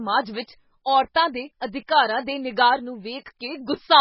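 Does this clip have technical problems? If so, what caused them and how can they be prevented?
Yes. MP3 compression damage runs through the whole clip, and it is heavy. Nothing sounds above about 5.6 kHz, so the speech is dull and its s sounds lose their hiss. The sound is also watery and swirly, because weak frequency components drop in and out from frame to frame. The likely cause is an encoder starved of bits, cutting the treble at a fixed frequency and discarding detail, which fits a very low rate around 16 kbps. Encoding at a higher bitrate, or keeping an uncompressed copy for playback, would prevent it.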